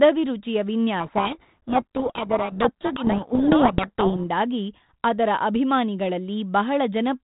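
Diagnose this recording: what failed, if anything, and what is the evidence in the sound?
The codec stage failed: a codec payload misread from 1.0 to 4.27 s, where the speech is buried under harsh, rasping distortion before clearing abruptly. The sender and receiver disagree on the bit order inside each G.726 code word, so the decoder applies wrong prediction differences sample after sample. On a spectrogram, harmonic striations dissolve into dense broadband grit filling everything below 4 kHz. The waveform turns jagged. Outside that span, the 32 kbit/s G.726 path carries lightly degraded band-limited speech.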